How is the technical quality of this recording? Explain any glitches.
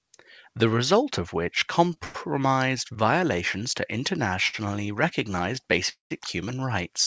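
The recording has repeated brief holds and two longer freezes, the signature of packets arriving late on a call link. The G.722 path audibly stops at 8 kHz.

Short stalls from a late packet occur at 1.94–1.98 s, just after "results of which", then at 2.94–2.98 s and 4.48–4.55 s. Each time a sound is briefly held too long with a faint buzz or dip. The jitter buffer ran empty, the receiver stretched the last sound by about 16 to 56 ms, and the audio resumed with nothing lost.

Call audio freezes come at 2.04–2.16 s, again after "results of which", and at 5.89–6.12 s. The first is a 102 ms fading buzz or hiss. The second decays to about 140 ms of silence. Both likely come from held-up packets draining the buffer, after which the audio continues from where it stopped.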